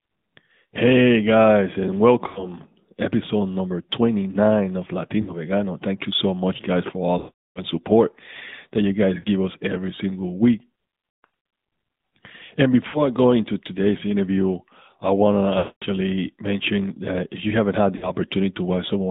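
Speech heard through the AMR narrowband mobile codec at a rate that sounds like about 10.2 kbps. The band runs only from 150 Hz to 3.7 kHz, and the buzzy, synthetic texture comes from the codec model rather than simple low-pass filtering. Lost AMR speech frames at 2.28, 5.22, 7.18, 9.2, 11.24, 12.88, 15.58 and 17.96 s stretch the last sound and fade it out, instead of giving the clean gaps of packet dropouts. The longest, from 7.18 to 7.64 s, decays to silence.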